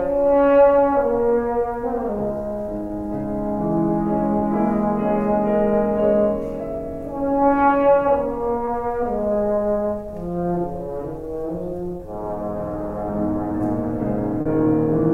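At 2.87, 4.39, 8.65, 11.97 and 14.41 s there is short concealed packet loss. Each time, a piece of the stream arrived too late to decode. The receiver covered the gap by extending the sound just before it, then blended back into the real signal. The first four gaps are 20 ms each; the last is 40 ms. Each is heard as a brief smear or wobble, and a very short sound can go missing.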